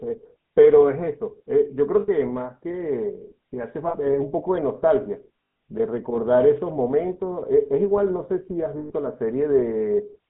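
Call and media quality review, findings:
GSM full-rate codec, whole clip: buzzy, gravelly speech texture, consistent with 13 kbps GSM full rate. Spectrogram shows a hard band of 150 Hz to 3.7 kHz with coarse, smeared harmonics. Regular-pulse excitation from a vocal-tract model roughens the voicing.

Lost GSM frames at 2.00–2.09 s (80 ms), 3.88–3.95 s (60 ms), 5.44–5.60 s (scattered, longest run around 100 ms) and 8.78–8.92 s (120 ms): brief metallic ring. Concealment repeats the last good frame. Waveform shows a held, repetitive segment. Spectrogram shows frozen, streaked bands.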